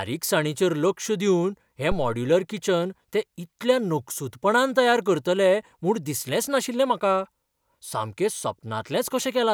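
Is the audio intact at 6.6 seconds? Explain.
Yes, the speech runs through 6.6 seconds without any audible dropout, click, distortion or other technical fault at that point.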